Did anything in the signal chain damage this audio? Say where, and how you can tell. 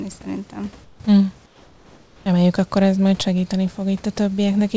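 Yes, in call processing. From 0.84 to 1.00 s and from 1.46 to 2.26 s, the room background turns flat and featureless, about 6 dB and then about 3 dB quieter. That's likely comfort noise in place of the background: the sender's discontinuous transmission went quiet, and the receiver filled the gap with synthetic noise.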